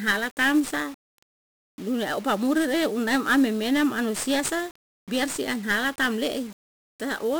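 From start to finish the speech carries 1-bit DFPWM compression damage, and it is heavy. Each sample is reduced to a single up-or-down step of an adaptive slope, so the waveform is only roughly traced, which fits a stream of about 48 kbps. The result is a dense fuzzy crackle riding on every syllable and a treble that is dulled or swamped by hiss. Unlike perceptual codecs, there is no swirling or missing-band effect. The noise is broadband and locked to the signal.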